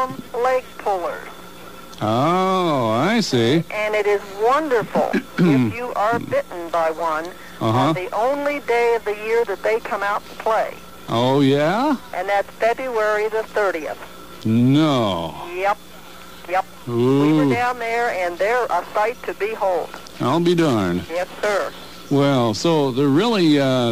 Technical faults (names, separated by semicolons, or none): none